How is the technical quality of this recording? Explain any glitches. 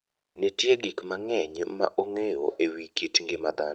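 One glitch stands out, right at the start of this speech recording, which came through a call path whose top end stops around 8 kHz.

From 0 to 0.35 s, before anyone speaks, the background is a flat, featureless hiss about 12 dB quieter than the room tone after it. That's likely comfort noise in place of the background: the sender paused transmission during silence (Opus DTX), and the receiver filled the gap with synthetic noise.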